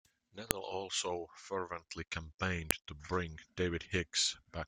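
Speech, with two sharp, loud clicks at 0.51 s, just before "also fervently", and 2.71 s, just before "to bring". Both are a file header played as audio: separate WAV pieces were joined without stripping their headers, so a few dozen bytes of header data are decoded as samples and snap out regardless of the speech. On a waveform each shows as a brief spike; on a spectrogram, a thin vertical line spanning all frequencies.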